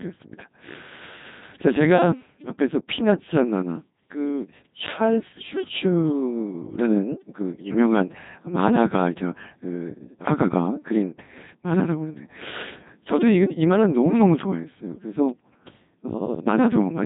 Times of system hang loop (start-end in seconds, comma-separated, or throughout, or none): none